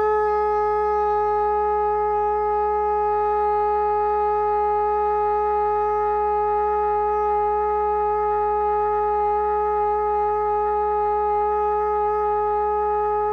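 A steady low drone sits under this recording of sounds from start to finish, a constant tone at 60 Hz with some low harmonics, roughly 20 dB below the main sound. This is mains hum: power-line current leaking into the signal path, most often through a ground loop between connected equipment or from a transformer sitting close to the cables or electronics.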